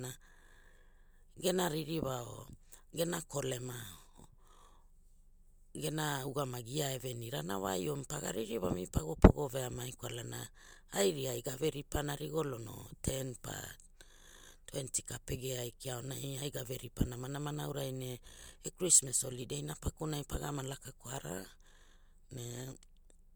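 No technical faults can be heard anywhere in this speech recording.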